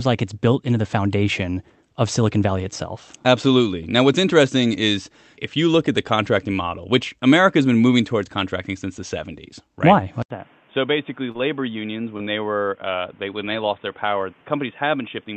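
At 10.22 s the speech drops out for 80 ms and returns duller, with nothing above 3.6 kHz, slightly quieter, and over a new noise floor, most likely an input switched to a poorer device. Unlike an EQ change, the level, tone and background noise all change together and stay changed to the end.

Two short concealed packet losses follow, at 11.31–11.38 s and 12.17–12.21 s. Each replaced a 20 ms gap with synthesized continuation, heard as a brief smear or wobble rather than the click or silence of a plain dropout.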